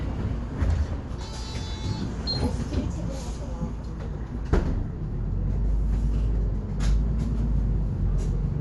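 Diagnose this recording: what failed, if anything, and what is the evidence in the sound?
Codec stage, throughout: nothing above 11.4 kHz, and rough, fluttering noise around tones where bit-starved lines get noise-filled, unlike a clean low-pass. Likely Dolby Digital compression, fitting a low bitrate near 64 kbps.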